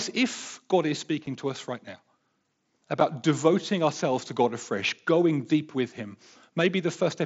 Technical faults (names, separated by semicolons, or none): unconcealed Bluetooth headset packet loss